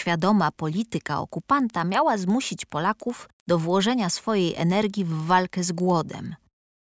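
Throughout the speech, a faint tick recurs ten times a second, tied to the signal and absent in pauses. It is a resampler restarted on every block: each 100 ms block, likely converted from 44.1 kHz down to 16 kHz, was processed in isolation, so its edges lacked true neighbouring samples. Unlike dropouts or buffer underruns, nothing goes missing and no gaps open. The ticks stay perfectly even rather than irregular.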